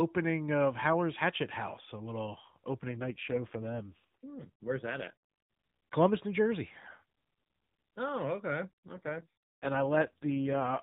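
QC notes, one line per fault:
2.88–5.14 s and 8.88 s to the end, AMR rate drop: the speech turns rougher, buzzier and more synthetic for about 2.3 s, then for about 1.9 s. The band stays the same and nothing drops out. The narrowband codec appears to be stepping down to a low mode, which fits a fall from 12.2 to 4.75 kbps. Fewer bits go to the excitation pulses. The vocal-tract model then sounds coarse until the higher rate returns after the first drop; the second lasts to the end.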